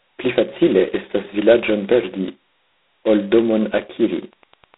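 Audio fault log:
throughout, G.726 ADPCM: The speech carries a harsh, rasping hiss that rises and falls with its loudness, sitting inside a thin telephone band of roughly 250 Hz to 3.7 kHz with nothing above 3.9 kHz. The coder sends only a coarse difference from its own adaptive prediction of each sample, so every error becomes noise riding on the signal. The heaviness of that grit fits the 16 kbit/s mode, about two bits per sample.
3.33 to 4.77 s, Wi-Fi interference: A faint, steady ticking appears and runs to the end of the clip, about ten clicks a second and sitting far below the speech. The clicks repeat every 102.4 ms, the beacon interval of a nearby Wi-Fi radio. The audio circuit picks up each radio burst and rectifies it, turning the radio-frequency pulse into a low-level click at that fixed rate.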